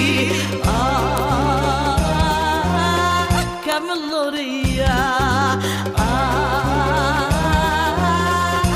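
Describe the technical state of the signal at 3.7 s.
A file header played as audio sits at 3.72 s: a new piece of audio begins there with its WAV header left in place, so those few dozen bytes of file data are read as samples and burst out as one sharp, loud click, independent of the surrounding sound.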